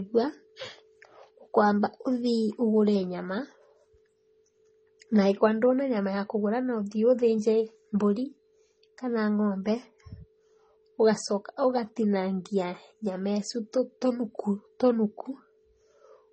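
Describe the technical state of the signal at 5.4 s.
At 5.4 s the speech carries transcoding between lossy codecs, present across the whole clip rather than at that moment alone. Nothing sounds above 8.4 kHz, and the artefacts of the different codecs are heard together. This points to low-bitrate HE-AAC followed by a low-rate MP3 encode, the MP3 encode likely spending bits on the HE-AAC artefacts and adding its own. On a spectrogram a flat ceiling at 8.4 kHz runs the full length, with blocky, speckled energy beneath it.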